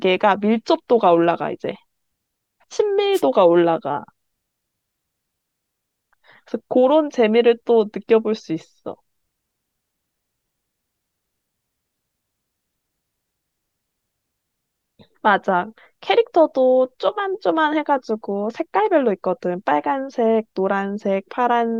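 At 3.13 s the radio link of an analogue FM wireless microphone fades briefly, as reflected copies of the signal arrive out of step and cancel at the receiver. With the carrier weakened, the receiver's own noise rises through the speech for about a tenth of a second, until 3.22 s. This wireless microphone noise hit sounds like a quick swish of static over the voice.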